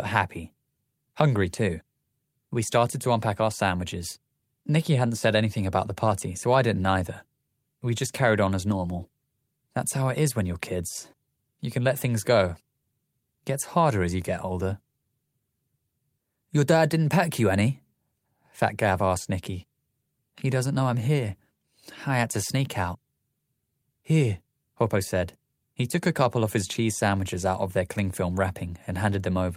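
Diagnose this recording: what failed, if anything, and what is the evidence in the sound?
Nothing failed in this recording, and the sound gives no evidence of any fault at any stage.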